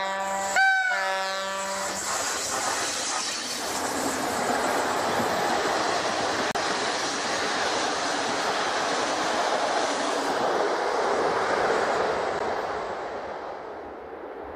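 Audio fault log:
6.51 to 6.55 s and 12.39 s: Bluetooth stall. The sound cuts to silence for 35 ms, then 13 ms, and resumes, likely because interference delayed packets until the headphone buffer ran empty.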